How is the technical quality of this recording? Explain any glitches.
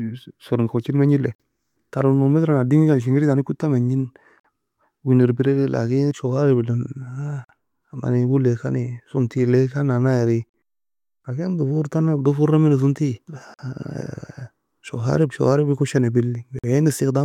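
The speech is broken by a regular gap between chunks: hard-edged silences of about 48 ms at 1.35, 4.40, 7.44, 10.49, 13.54 and 16.59 s, one every 3.0 s. Silence is inserted at each join, but nothing is cut out, so the speech resumes intact. Packet-loss dropouts would fall irregularly and remove sound.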